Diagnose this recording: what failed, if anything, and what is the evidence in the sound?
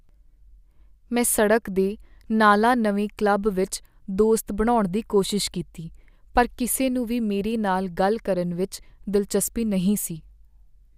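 Nothing in the recording points to a failure anywhere in the chain, so there is no diagnosis to make.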